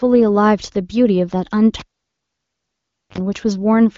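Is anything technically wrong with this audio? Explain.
Yes. From 1.8 s to 3.18 s, a live cable is pulled and plugged back in. A pop is followed by about 1.3 s of near silence. Then 51 ms of 50 Hz buzz occurs as only the plug's tip touches, and a second pop follows. On the waveform, this looks like spike, flat line, dense buzz block, spike. On a spectrogram, it appears as vertical click lines and a 50 Hz stripe.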